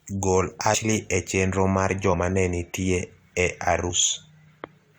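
At 0.73 s, just before "e chenro mar", the speech lurches forward as about four compressed frames are skipped. Around a tenth of a second of audio is missing, and the decoder has simply stepped past frames that were lost or rejected as damaged. A second skip of about three frames, roughly 70 ms, falls at 3.89–3.91 s, right after "nenitie e". Unlike a dropout, no silent gap opens. Unlike a hard splice, there is no sharp click. The overlapping 23.2 ms frames smear each join into a soft blip.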